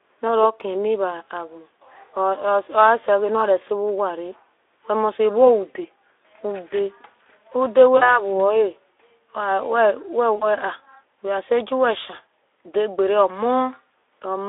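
VoIP packet loss concealed by the speech codec strikes at 7.97–8.26 s (about 40 ms missing) and 10.35–10.46 s (about 60 ms). The Speex decoder extrapolates its last pitch, stretching the sound into a buzzy tone or coloured noise that fades.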